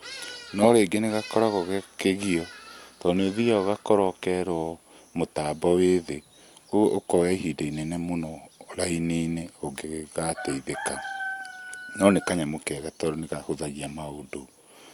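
No technical faults can be heard anywhere in this speech recording. Nothing in the audio breaks, stalls or changes character at any point.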